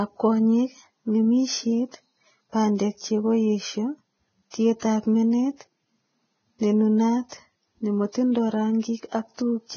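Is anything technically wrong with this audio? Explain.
Yes. Throughout the speech there is heavy lossy-codec damage, most likely Vorbis compression at a very low setting. Nothing is present above 6.5 kHz, so the top octave is missing and sibilants sound dull. Below that cut-off, the upper band is quantised so coarsely that fine harmonic detail has turned into noise of similar energy. The result is a hissy, grainy texture with roughened vowels and softened consonant onsets, which fits a bitrate around 16 kbps.

From 7.29 to 7.32 s there is pre-echo. A sharp onset lands late in a transform block, and the quantisation noise sized for that loud moment is spread across the whole block, including the quiet span before the attack. That leaks a smear of hiss about 32 ms ahead of the onset, so the transient arrives blurred and lacks its crisp edge.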